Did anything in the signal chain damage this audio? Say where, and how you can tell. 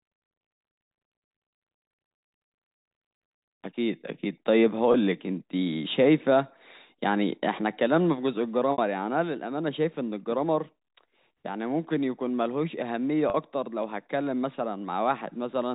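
Yes. The damage happened in the network: packet loss with pitch repetition, in three places. About 20 ms is missing at 4.92–4.94 s, 60 ms at 8.72–8.78 s and 40 ms at 13.30–13.34 s, gaps that fit whole 20 ms packets. The receiver bridged each gap by looping the last pitch period, so the sound briefly holds on a buzzy, frozen tone. At 8.72 s the longest gap fades into silence before the live telephone-band speech resumes.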